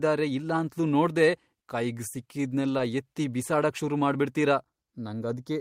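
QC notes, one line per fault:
2.77–2.81 s, short concealed packet loss: about 20 ms of the call arrived too late for the decoder, right after "ಇಲ್ಲಾಂತ್ಲೂ ನೋಡ್ದೆ ಕೈಗ್ ಸಿಕ್ಕಿದ್ನೆಲ್ಲ". The receiver extended the preceding sound across the gap and blended back into the real audio before "ಎತ್ತಿ ಬಿಸಾಡಕ್ ಶುರು ಮಾಡ್ಬಿಡ್ತೀರ", leaving a brief smear.
4.60–5.61 s, channel delay (comb filtering): from just after "ಎತ್ತಿ ಬಿಸಾಡಕ್ ಶುರು ಮಾಡ್ಬಿಡ್ತೀರ" to the end, one channel lags the other by a fraction of a millisecond before the mono sum. Shared content cancels at evenly spaced frequencies, the first around 3 kHz, so the speech turns hollow and phasey.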